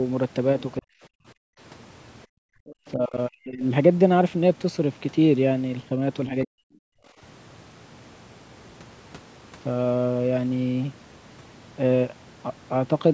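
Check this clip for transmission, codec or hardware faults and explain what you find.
The clip has echo-canceller faults of three kinds, all in the first 7.2 seconds, and the call's microphone processing leaves nothing above 8 kHz.

Speech suppressed in double talk: at 0.79–0.93 s, 2.95–3.62 s and 6.28–6.65 s the talker's voice sinks abruptly, by something like 40 dB at its lowest, before recovering. This is likely the echo canceller hearing both the talker and the far end at once. Unable to separate the two, it suppressed the whole microphone signal, taking the near-end voice down with the echo it was trying to remove.

Background gated by the echo canceller: at 1.21–1.59 s, 2.27–2.66 s and 6.93–7.19 s the room tone drops away, by about 40 dB in the first two and about 29 dB in the last, so the background goes briefly dead before snapping back. The canceller clamped the microphone hard while the loudspeaker was active, then released it, and the ambience follows that on-off gate.

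Other side's voice leaking through: from 2.66 to 2.91 s, immediately after the second gated stretch, a faint second voice surfaces, roughly 25 dB under the main speech. It is likely loudspeaker playback of the far-end talker reaching the microphone and surviving the echo canceller's subtraction, so a residue of the far-end voice passes into the sent audio.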